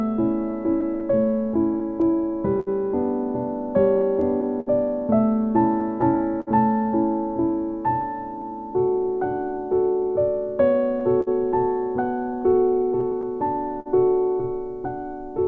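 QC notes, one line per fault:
throughout: clock drift between sender and receiver. The sending end's clock runs slow, by something like five percent, so audio arrives a little slower than the receiving end plays it out. The jitter buffer keeps drifting toward empty, and the receiver has to keep stretching the stream to stay in step. That steady mismatch is what drives the small, unevenly spaced timing stumbles heard across the clip, against the band-limited sound of what seems to be a G.722 call path with nothing above 8 kHz.
0.52–15.34 s: repeated timing corrections. Over this span the receiver plays the sound at about 98% speed, repeating short slices to pad out the slow sender's stream. In all, roughly a third of a second is added. Every correction goes the same way, lengthening rather than cutting, but they land at irregular points. Each one is tiny, so they are heard, if at all, as slight hiccups or a faintly unsteady tempo rather than clear breaks.
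0.81–8.44 s and 11.00–13.88 s: scattered short gaps. Packets were lost or late here and there. The receiver covered each hole by extending the preceding sound instead of leaving silence. The first stretch has around fifteen such patches, the longest about 70 ms, concealing a few percent of the span. The second has around seven, the longest about 50 ms. Each patch is heard as a brief tick, smear or stutter in otherwise continuous sound.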